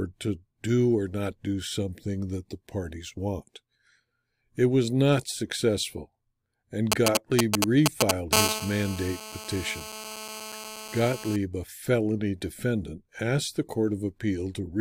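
A nearby 2G phone begins signalling just after "was not successful and", and the audio circuit rectifies its short radio bursts: from 6.92 to 8.35 s a galloping dit-dit-dit of brief 217 Hz buzzes, the GSM signalling bursts, sits a little louder than the speech.

The phone then moves into a call, transmitting continuously at 217 bursts per second, so from 8.35 to 11.36 s a steady, raspy GSM phone buzz rich in harmonics runs about 7 dB below the speech, ending just before "a felony defendant asked".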